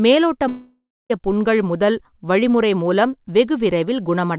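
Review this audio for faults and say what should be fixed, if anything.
Packets likely stopped arriving from 0.48 to 1.12 s, a long network dropout on this G.711 path, which carries nothing above 4 kHz. The receiver stretched the last sound into a fading buzz, silent for the final 0.27 s, and speech resumes at "புண்கள் முதல் வழிமுறை மூலம்" with about 0.62 s lost. Fixing this means stabilising the network link, or adding redundancy or retransmission so lost packets can be recovered before playout.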